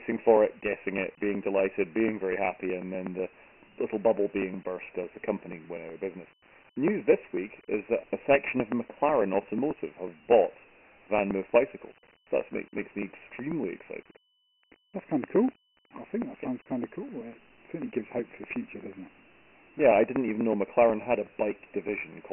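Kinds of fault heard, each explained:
Channel delay (comb filtering), throughout: a copy of the signal arriving about 0.4 ms late has been summed with the original into mono. Components shared by both cancel at evenly spaced frequencies, with the first notch around 1.5 kHz and further notches spaced above it. Because this delay is well past the range where only the top end dulls, the speech takes on a fixed hollow, phasey colouring that does not move as the voice changes.
Dialogic VOX ADPCM, throughout: the speech has passed through Dialogic (OKI) 4-bit ADPCM at 24 kbps, which fits 6,000 samples a second and leaves nothing above 3 kHz. The low end is thinned as on a 250 Hz phone line. The coding damage is heavy: the coarse adaptive step size leaves a gritty hiss that rises and falls with the speech, riding on every syllable, on top of the narrow, muffled band.
Periodic USB or driver dropouts, 0.12 to 22.25 s: something blocks the audio path every 0.123 s, and roughly 2 ms of audio is skipped each time, with the signal on either side butted together. 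Across the clip that adds up to around two hundred evenly spaced losses. They come through as a steady rhythm of small ticks during the speech and fall silent in the pauses, since a skip in silence leaves no step to hear.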